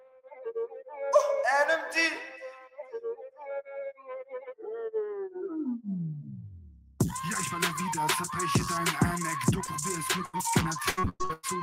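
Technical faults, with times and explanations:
throughout: noise suppressor applied to music or sounds. A suppressor built for speech stays active across the whole clip. It treats steady tones, ambience and decays as noise and pulls them down, then lets them back up when something sharper arrives. The level swings by something like 15 dB. Sustained parts sink while attacks pass. The sound pumps and thins instead of holding a steady body.
0.00–0.50 s, 0.67–1.03 s, 2.19–4.62 s: sound cut by the noise suppressor. In these three stretches the suppressor clamps down harder than elsewhere. The deepest drops reach about 22 dB, about 21 dB and about 22 dB. The long third stretch loses roughly two seconds of level. The held, steady material reads as noise to the processor, so it is pushed far down. The sound seems to fall away or go hollow.
9.65–9.69 s and 10.37–10.41 s: short concealed packet loss. 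About 20 ms of audio fails to arrive at each point. The receiver patches the hole by carrying the previous sound forward briefly, 17 ms and 22 ms of fill, then crossfades back. Each is heard as a tiny smear or wobble.
10.25–10.35 s: burst of packet loss. About 80 ms goes missing in one block. The decoder extends the last sound for 81 ms and fades it as the gap lengthens. A held buzz or decaying hiss replaces the real audio. Playback then jumps ahead, so the material that belonged there never plays.
10.89–11.45 s: repeated packet loss (robotic sound). Losses hit again and again here, with about six breaks. The longest is 105 ms. Around 360 ms of real audio is missing, and 355 ms of patch fills 64% of the span. Each patch repeats the preceding sound before the next gap lands. The result is choppy stutter with chunks absent.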